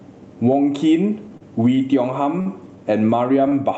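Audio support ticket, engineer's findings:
Gain pumping: speech squashed flat, loud and soft parts pulled closer in level, level swinging roughly 15 dB. Likely cause: input gain set far too high, with a fast limiter or compressor clamping down on every peak.

Short stall from a late packet: held sound at 1.37 s (33 ms), 1.75 s (23 ms), 2.41 s (48 ms) and 3.50 s (21 ms). Nothing lost; playback resumes where it stopped. Jitter buffer ran dry on the Opus call path (top end stops at 8 kHz), so the receiver stretched the last audio.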